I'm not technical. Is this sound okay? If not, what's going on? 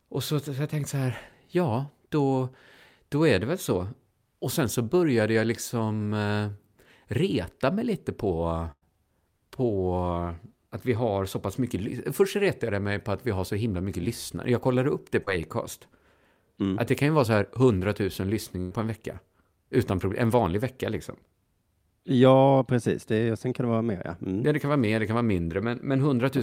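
No. Twice the speech briefly stalls into a held, fading sound and then jumps ahead: at 8.71 to 8.83 s, after "mig lite på", where it drops to silence partway, and at 18.61 to 18.73 s, just before "en vecka". Each is a burst of packet loss: about a tenth of a second of audio never arrived, so the receiver stretched the last sound to cover the gap.

At 15.23 to 15.29 s, after "kollade upp det", there is a quick smear. This is short concealed packet loss: a few hundredths of a second were lost and patched over.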